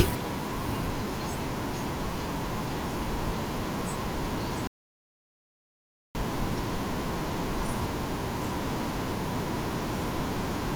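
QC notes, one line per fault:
4.67–6.15 s, rebuffering stall: the player exhausted its downloaded audio and halted playback until more data arrived. The speech drops to silence for about 1.48 s, then resumes exactly where it stopped, so nothing is missing but the clip runs longer.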